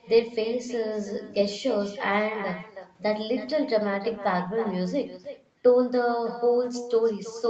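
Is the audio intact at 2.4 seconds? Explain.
No. At 2.4 seconds, as throughout the clip, the speech carries an echo with no canceller. The far end's loudspeaker feeds back into its microphone, and the signal returns after the network round trip. A quieter copy, about 14 dB down and roughly a third of a second late, trails every phrase. On a spectrogram each syllable's energy pattern repeats faintly to its right. The waveform shows smaller ghost bursts filling the gaps.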